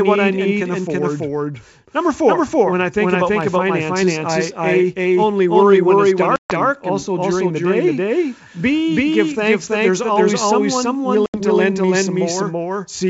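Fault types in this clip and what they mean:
Doubled audio track: A second full-band copy of the speech runs about 0.3 s behind the first, at roughly the same level, for the whole clip. It has no decay or room colour. It is likely a second capture by a slower path.
Packet loss on an ADPCM call: The audio drops to hard-edged silence for 140 ms at 6.36 s and for 80 ms at 11.26 s. The decoder's predictor and step size lose step. Speech returns slightly distorted, then settles.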